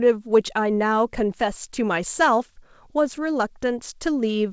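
Nothing technically wrong can be heard in this speech recording. It has passed through a WebRTC call path, and the absence of anything above 8 kHz fits a wideband call codec such as G.722.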